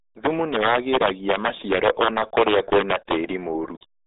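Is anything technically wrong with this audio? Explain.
Yes, two problems run through the whole speech clip.

Integer overflow is on from start to finish. The signal is pushed about 7 dB past full scale, and instead of clamping, the loudest peaks (around one percent of the samples) wrap to the opposite sign. The result is harsh, snapping cracks on loud syllables, much nastier than clipping.

The RealAudio 14.4 codec is also present throughout. Nothing gets through above 3.8 kHz, and the usable band sits roughly between 300 Hz and 3.7 kHz, which fits an 8 kbit/s dial-up speech codec. The coding damage is heavy, so the voice comes out muffled and gargly.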